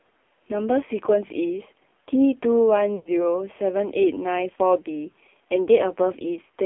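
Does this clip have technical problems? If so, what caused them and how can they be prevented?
Yes. The whole clip carries AMR narrowband mobile codec damage, and it is heavy. The speech is confined to a phone band of roughly 250 Hz to 3.4 kHz. Nothing above that survives. The voice sounds buzzy and synthetic. That is the vocal tract model working with very few pulses per frame. The harshness fits a low mode around 5.9 kbps. To prevent it, use a wideband or higher-rate codec path, or record the speech directly rather than over a mobile call.

There are also lost AMR speech frames from 2.96 to 3.10 s. The decoder covered the gap by repeating its last good pitch and vocal tract settings at falling gain. The sound stretches out briefly and sinks toward silence. The voice then returns thin and rough for a moment. The gap of about 100 ms fits five lost 20 ms frames, caused by radio errors that failed the checksum. 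To prevent it, ensure a stronger radio link or use error-resilient transport with retransmission.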